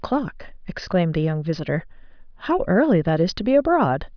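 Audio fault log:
No faults can be heard anywhere in the speech recording. Nothing in it calls for an entry in this log.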